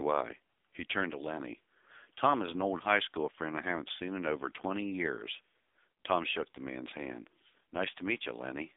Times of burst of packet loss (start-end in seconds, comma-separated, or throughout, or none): none